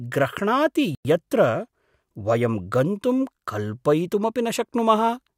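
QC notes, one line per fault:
0.95–1.05 s, Bluetooth stall: the speech drops to silence for 100 ms, then resumes where it stopped. The likely cause is interference delaying packets until the headphones' buffer emptied. Waveform flatlines and spectrogram shows a clean vertical blank gap across all frequencies.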